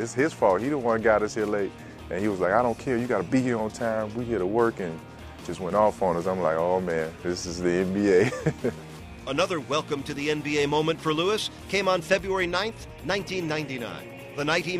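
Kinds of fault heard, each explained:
Chunks out of order: At 5.41 to 5.43 s, one 10 ms chunk plays a single chunk late, swapped with its neighbour, giving a brief jumbled flicker at the hard joins. Unlike a dropout or repeat, no audio is missing or doubled, only reordered.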